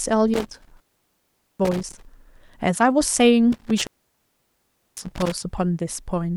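From 0.34 to 2.05 s and again from 3.52 to 5.32 s the speech drops out through an intermittent contact, a loose connection opening for about 0.79 s and then 1.1 s. Each break is bounded by crackle, with faint hiss while the line is open.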